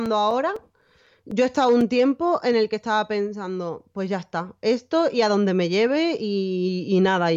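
Speech with periodic USB or driver dropouts from 0.06 to 1.81 s, ending before "tiempo en el que": about seven brief silent ticks every 0.25 s, evenly spaced unlike random crackle.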